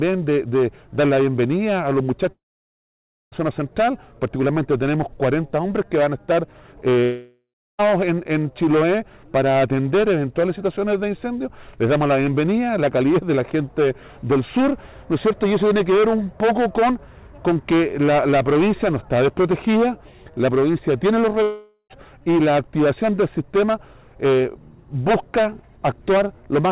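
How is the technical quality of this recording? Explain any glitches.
The recording has three gaps where audio is lost. Nothing sits above 4 kHz, which fits a narrowband call codec.

The gaps fall at 2.32 to 3.35 s, 7.04 to 7.82 s and 21.43 to 21.93 s. Each is likely a long network dropout. Packets stopped arriving. The receiver stretched the last sound into a fading buzz, then went silent. Roughly 1 s, 0.76 s and 0.48 s are missing.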